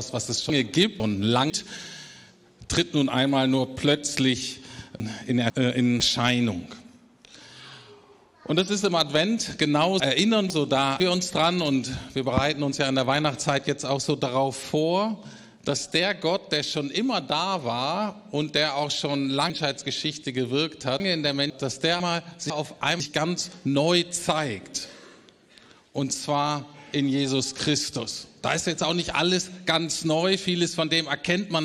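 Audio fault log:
0.5–1.5 s, 5.0–6.0 s, 10.0–11.0 s and 22.0–23.0 s: chunks out of order. Each is a brief jumbled moment, as two 500 ms blocks of sound play swapped, the earlier one arriving one chunk late, leaving three abrupt joins per event.
19.5–21.5 s: chunks out of order. A longer garbled stretch, because a 500 ms chunk arrived three chunks late and plays after the 1.5 s of audio that should follow it, so the sound jumps ahead and then back across hard joins.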